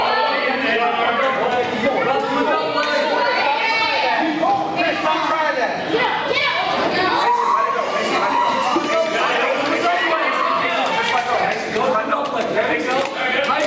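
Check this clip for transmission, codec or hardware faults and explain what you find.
There's one fault here, and it runs the whole clip: gain pumping. The gain gets shoved down under each loud moment, with a swing of around 15 dB, so everything sounds squashed. The likely cause is input gain set far too high, with a fast limiter clamping down on each peak. The call's microphone processing, with nothing above 8 kHz, is normal.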